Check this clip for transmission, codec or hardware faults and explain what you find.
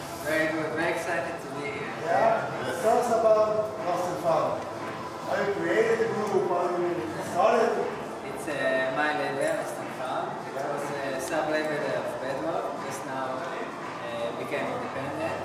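No transmission, codec or hardware faults can be heard anywhere in the clip, with the signal continuous and stable throughout.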